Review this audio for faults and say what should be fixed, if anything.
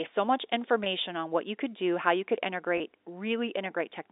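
Mains hum at 50 Hz runs through the whole clip as a steady low tone, roughly 30 dB below the speech, with some low harmonics above it. A ground loop or a nearby transformer is feeding the power line into the signal path, so the hum sits under every pause and doesn't follow the speech level. Prevent it by breaking the ground loop with a single-point ground or an isolation transformer, and by keeping cables away from power supplies.

Packet loss with pitch repetition occurs twice, at 0.84 to 0.86 s and again at 2.78 to 2.80 s. Each gap is 20 ms, which fits two 10 ms packets dropping together. The receiver covered each hole by replaying the last pitch period, so the speech briefly holds with a slightly buzzy, frozen quality before the real signal returns. Prevent it with a jitter buffer and forward error correction, or on a cleaner, less congested network path.

Channel delay (comb filtering) begins at 1.08 s and lasts to the end. 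One channel lags the other by about 0.1 ms, only a few samples, and the two are summed to mono. That places the first cancellation notch at roughly 5 kHz, so the response sags toward the top of the telephone band and the speech turns duller and hollow. G.711 coding, which passes nothing above 4 kHz, is working normally. Prevent it by aligning the channels or sending a single mono channel before summing.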